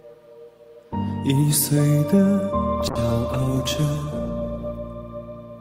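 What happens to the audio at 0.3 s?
Nothing goes wrong at 0.3 s; the audio is intact at that point, with no dropout, click or distortion.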